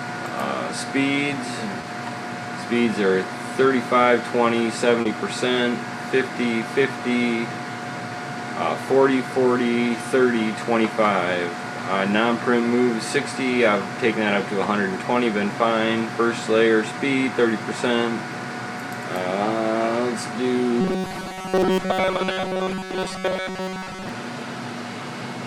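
At 1.81 to 1.85 s there's a short concealed packet loss: about 20 ms of audio didn't arrive at the decoder in time, so the receiver papered over the gap by extending the preceding sound and then easing back into the real signal. It comes across as a tiny smear. The same thing happens again at 5.01 to 5.07 s, this time 40 ms, and the patch comes across as a wobble before things blend back.

From 20.81 to 24.09 s the audio turns into robotic sound from repeated short buffers. There's a rigid metallic buzz at 188 Hz laid over everything, and it still loosely follows the shape of the underlying sound. The likely cause is new audio arriving too rarely, so the software keeps looping the last snippet, around 5 ms, which fits a 188 Hz buzz. That looping replaces something like seven tenths of the real audio during the stretch.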